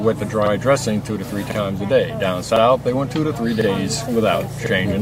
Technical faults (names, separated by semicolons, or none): overlapping chunks